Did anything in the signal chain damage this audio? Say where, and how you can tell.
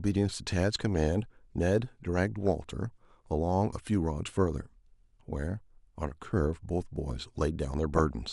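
Yes. DAB burbling at 2.45–2.56 s and 7.96–8.04 s puts short blips of noise over the speech. Weak reception let bit errors, a fraction of a percent, slip past error correction into the MP2 data, so corrupted samples put noise blips in single sub-bands.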